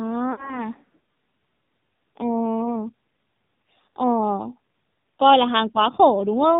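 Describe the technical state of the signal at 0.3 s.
At 0.3 s the signal carries AMR narrowband mobile codec damage. Everything above 4 kHz is missing, and the low-rate vocal tract model leaves speech heavily buzzy and synthetic, which fits the 5.9 kbps mode or one near it.

Lost AMR speech frames begin at about 0.32 s and affect the sound until 0.65 s. The decoder repeats the last good pitch and vocal tract settings with falling gain, so the sound stretches and fades. The gap fits about 60 ms of lost 20 ms frames, and the voice comes back weak or rough for a moment.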